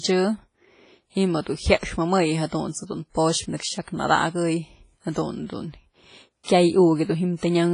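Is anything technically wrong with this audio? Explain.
Yes. Throughout the speech there is heavy transform-codec damage, likely WMA compression at a low bitrate, perhaps around 24 kbps. Long blocks smear quantisation noise into a ringing, washy hiss that breathes with the voice, and nothing survives above 10.4 kHz. A plain low-pass filter would be dull but clean, without that hiss.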